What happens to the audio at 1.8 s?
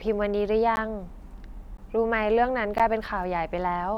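At 1.77 s there is a gap between chunks. The speech stops dead for about 13 ms and then resumes. The audio arrives in blocks, which fits 1-second chunks. Silence sits at the join. Nothing is lost, but the flow breaks with hard edges.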